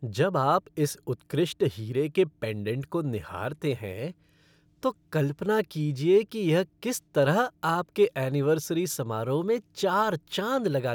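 No technical faults can be heard anywhere in the speech recording, and the signal stays continuous and steady throughout.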